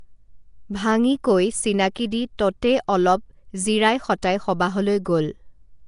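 Throughout the clip the speech has a rough, hissy halo and a smeared, underwater character, and nothing is present above 10.6 kHz. This points to Nellymoser compression, the Flash-era microphone codec, at a rate consistent with about 44 kbps. The likely cause is its fixed, coarse bit budget per block: weaker spectral bands receive no bits and are filled with noise, so the damage is plainly audible across the whole recording.

At 1.95 s a sharp attack is preceded by a brief hiss lasting about 11 ms, and the onset itself sounds softened. This is pre-echo. The attack falls late within a transform block, and the quantisation noise scaled for the loud part is spread across the entire block, including the quiet moment just before the attack.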